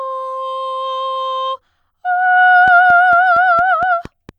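From 2.68 s until 4.3 s, a steady ticking rides on top of the music, a train of clicks at about 4.3 per second, evenly spaced, around seven in all. Each pop has much the same shape and reaches roughly the level of the music itself. A pulse repeating this regularly is likely interference from nearby equipment or a faulty connection or power supply.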